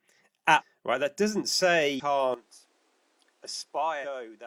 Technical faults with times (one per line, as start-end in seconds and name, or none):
0.56-0.62 damaged data in a compressed stream
1.95-2.02 damaged data in a compressed stream
2.34-4.46 input switched to a poorer device
4.00-4.05 damaged data in a compressed stream